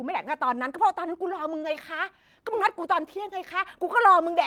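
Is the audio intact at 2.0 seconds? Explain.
No. Repeated timing corrections are running from 0.22 s to 4.21 s, so the moment at 2.0 seconds falls inside a stretch where the receiver keeps repeating short slivers of the speech. Each repeat is tiny, but together they stretch the stream to about 98% speed and add roughly 70 ms over the span. Around 2.0 s this is heard, if at all, as a faint hiccup or a slightly uneven pace.

Behind those corrections is clock drift between sender and receiver, present through the whole clip. The sender's audio clock runs slow by roughly one and a half percent, so its samples arrive a little late and the receiver's jitter buffer keeps draining. To avoid running dry, the receiver fills in by repeating bits of audio at uneven intervals, always in the same direction, which leaves the timing unsteady at 2.0 s.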